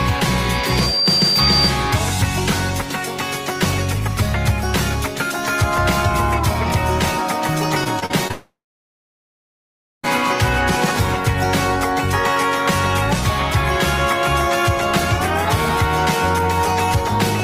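The audio has three faults. A loudspeaker feedback squeal runs from 0.53 to 1.75 s. It is a single 4.7 kHz tone that builds up over about half a second and sits about 5 dB above the sound. A microphone is picking up its own loudspeaker, and the loop gain passes one at that frequency. Repeated packet loss, heard as robotic sound, follows from 7.84 to 8.31 s. Four short holes open, the longest 37 ms. Each is patched by extending the last sound, so about a fifth of that stretch is filled in and comes out choppy. From 8.31 to 10.05 s the audio is replaced for about 1.7 s. A brief continuation of the last sound fades, and then silence lasts about 1.5 s. The audio returns without the missing part. This is likely a long network dropout.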